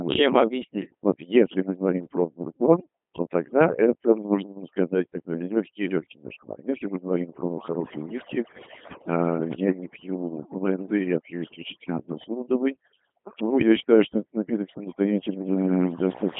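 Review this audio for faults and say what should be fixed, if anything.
Overdone noise removal, throughout: the noise reduction pulls individual frequency bands to near silence around its noise estimate, leaving twinkling specks in the background. Set the reduction more gently on the noisy source so quiet speech detail survives.

Codec 2 vocoder, throughout: speech is rebuilt from sine waves using only pitch, voicing, energy and envelope, giving heavy robotic buzz consistent with a 2.4 kbit/s mode, with nothing above 3.6 kHz. Use a waveform-preserving codec with a wider band where the link allows it.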